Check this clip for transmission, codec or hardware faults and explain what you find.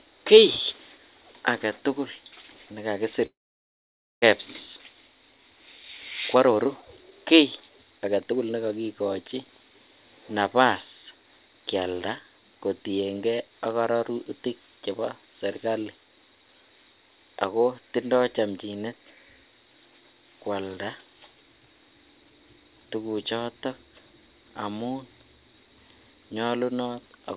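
Two transmission faults are present in this speech clip, carried over a narrowband call path with nothing above 4 kHz, which fits G.711 mu-law at 64 kbps.

Long network dropout, 3.26 to 4.24 s: the sound trails into a fading buzz or hiss, then about 0.89 s of silence, likely a delivery gap with 600 ms never played.

Jitter buffer speed-up, 6.35 to 7.20 s and 7.60 to 8.33 s: the receiver trims pitch-period slices to drain excess delay, so speech runs hurried at unchanged pitch, 128% then 113% speed.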